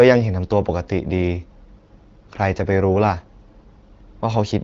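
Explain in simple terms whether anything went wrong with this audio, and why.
Nothing went wrong with this audio, because no fault can be heard anywhere in it.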